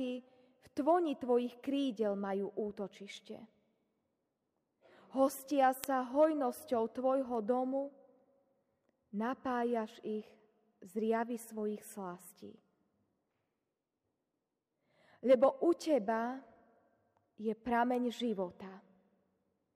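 Sharp single ticks of uneven strength recur at a steady pace of roughly one every one and a half seconds, about fifteen in all, from 1.31 s to 19.46 s. These are word clock ticks: a digital link read by an unlocked receiver whose clock differs by something like 15 ppm, so one sample slips at each crossing.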